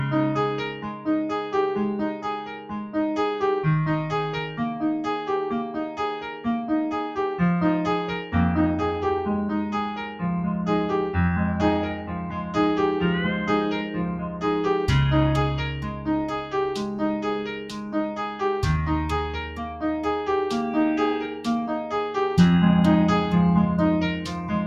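A noise suppressor built for speech runs over the whole clip and treats sustained sound as noise. Onsets pass, but held tones and tails are pulled down by around 10 dB. That leaves a breathing, thinning level that tracks steadiness, not loudness, unlike compressor pumping.

The sound is cut by the noise suppressor at 0.69–1.54 s (about 9 dB), 2.12–2.95 s, 5.89–6.46 s, 10.01–10.22 s, 11.94–12.56 s, 13.83–14.44 s, 15.82–18.41 s (the longest) and 21.27–21.47 s, with drops of about 7 to 8 dB. Decays sink early while attacks survive, which sets these dips apart from dropouts or a gate closing.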